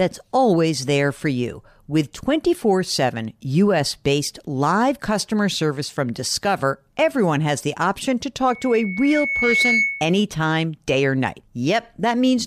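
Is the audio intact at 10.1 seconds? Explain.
No, 10.1 seconds falls inside a loudspeaker feedback squeal running from 8.48 to 10.23 s, just after "has the option to". The mic is catching its own speaker, and at 2.2 kHz the loop gain tops one, so a tone swells over roughly a second to about 5 dB above the speech.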